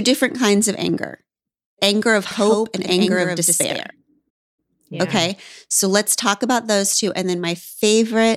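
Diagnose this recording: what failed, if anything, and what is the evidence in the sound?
From 2.31 to 3.91 s, after "anger of", a dry copy trails roughly a tenth of a second behind, about 5 dB down. This is a doubled audio track, likely a slower second capture path.

At 4.29 s the sound drops to silence for 0.28 s, then resumes. This is a playback stall, likely a buffer underrun or blocked player thread.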